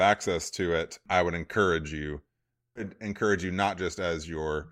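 A short speech recording in which, right after "I would encourage you", the sound lurches forward at about 2.75 to 2.81 s. A brief blip marks the join and the delivery resumes further on, as though part of the programme had been cut out. This is likely a stream segment skipped: one chunk of the segmented stream failed to arrive or load, and the player moved straight on to the next chunk instead of waiting, so the missing stretch simply never plays.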